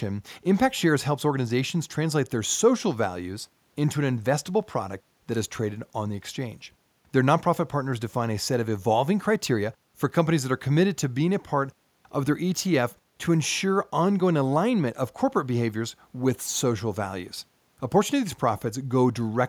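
No technical faults can be heard in the speech recording at any point, so there are no fault times or causes to give.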